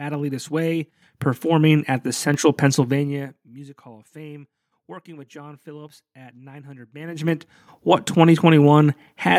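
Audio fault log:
1.02 s, microphone volume stepped up: just before "performing at the", voice and room tone jump together by about 8 dB in a single step. The call software has judged the microphone input too quiet and raised the device's input gain at once rather than ramping it, so the level change is an abrupt, simultaneous lift in both the talker and the background, with nothing easing the transition.
2.76 to 3.56 s and 6.96 to 7.48 s, zipper noise: during both level moves a fast ticking rides on the speech, at around 30 steps per second. The first is a fade down of roughly 25 dB in 1 dB increments; the second brings the level back up by roughly 25 dB in 2 dB increments. Each unsmoothed gain jump puts a small discontinuity in the waveform, and the train of clicks is heard as zipping while the level travels.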